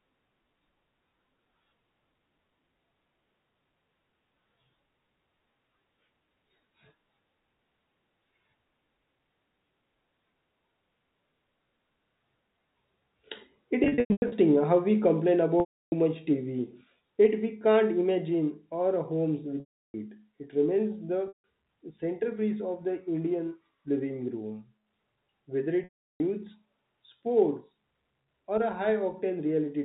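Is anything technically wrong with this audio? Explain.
Yes, the speech suffers packet loss with pitch repetition at 13.84 to 14.32 s, 15.60 to 15.92 s, 19.60 to 19.94 s, 21.28 to 21.44 s and 25.84 to 26.20 s. Audio packets went missing, and the receiver filled each gap by repeating the last pitch period and fading it out. At the short gaps the speech briefly holds a buzzy tone; at the longer ones it trails into silence before returning. The first event is scattered losses spread over about half a second, with the longest single gap 100 ms. The telephone-band G.711 coding cuts everything above 4 kHz.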